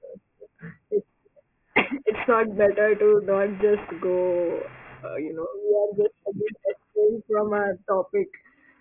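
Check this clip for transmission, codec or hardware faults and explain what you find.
One fault runs through the whole speech clip: aliasing. Energy that belonged above 3 kHz folds back down below it, which points to a drop to a 6 kHz sample rate with no anti-alias filter. Sibilants turn gritty and metallic, with false tones roughly 20 dB under the speech, and the spectrum runs hard up to 3 kHz. A plain low-pass would sound dull instead, with no added unrelated pitches.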